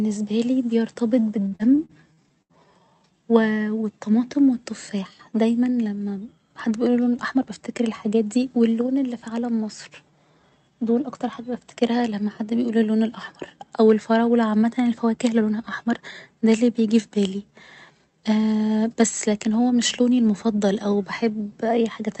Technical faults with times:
1.47-2.53 repeated packet loss (robotic sound)
7.09-7.47 jitter buffer speed-up
15.38-16.12 jitter buffer speed-up

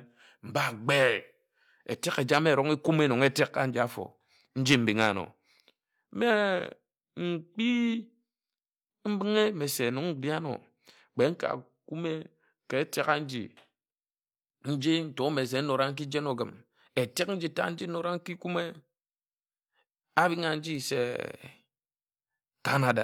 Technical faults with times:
none

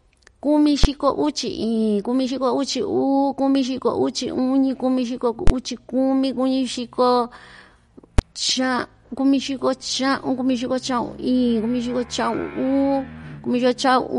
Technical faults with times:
0.00-14.19 MP3 compression
0.84 invalid numbers at full scale
5.47-5.50 invalid numbers at full scale
8.19 invalid numbers at full scale

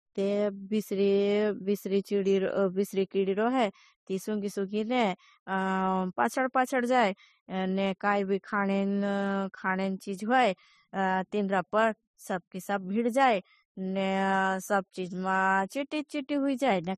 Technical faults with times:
0.00-16.98 transcoding between lossy codecs

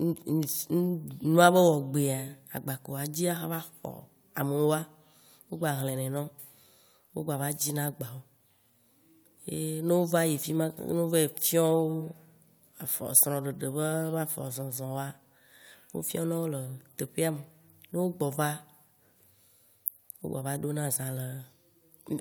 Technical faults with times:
none

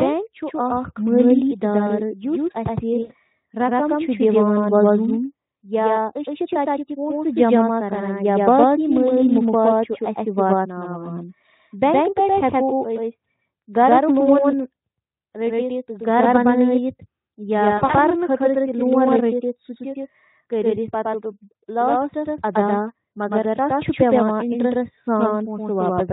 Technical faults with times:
0.00-26.13 doubled audio track
3.01-3.12 VoIP packet loss concealed by the speech codec
17.77-17.96 VoIP packet loss concealed by the speech codec

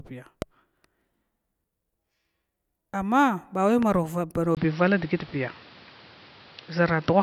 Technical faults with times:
0.42-0.44 loud pop
3.83-3.85 loud pop
4.55-7.23 input switched to a poorer device

